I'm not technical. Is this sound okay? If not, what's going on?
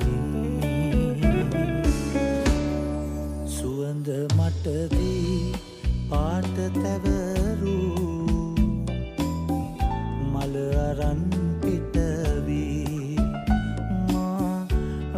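No. At 14.36 s the audio jumps forward by a few milliseconds. This is likely a dropped buffer (overrun): the recording program fell behind, a short piece was overwritten before it was saved, and the two ends were joined.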